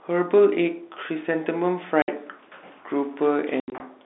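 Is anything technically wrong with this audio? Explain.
Yes, there's packet loss filled with silence: a 60 ms hole at 2.02 s, then 120 ms of dropouts scattered across 3.6 to 3.8 s, the longest 80 ms. Lost packets, which fits 20 ms packets, are replaced with silence, so the speech is chopped up with hard-edged holes. Underneath it all is the narrow G.711 telephone band.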